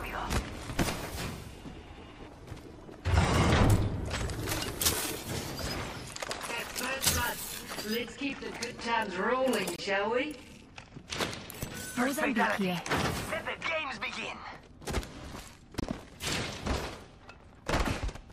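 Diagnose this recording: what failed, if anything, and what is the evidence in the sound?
The trouble is at the playback end of a segmented stream: a gap between stream segments. You get three hard-edged dropouts to silence, a short one at 3.76 s (about 7 ms), then 9.76–9.79 s (about 23 ms) and 15.80–15.83 s (about 26 ms), landing roughly every 6 s. That spacing matches 6-second segments whose timestamps don't quite butt together, so the player pads the hole with silence. Nothing is actually missing; the sound just gets pushed later.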